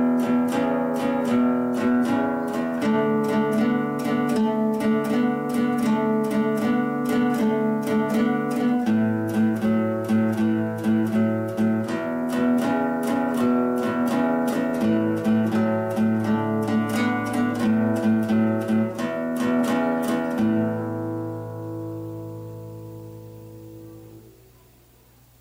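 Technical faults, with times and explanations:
Throughout, low bit depth without dither: grainy distortion tracks the sound and quiet passages go gritty, likely from rounding to 8 bits, with error roughly 40 dB down.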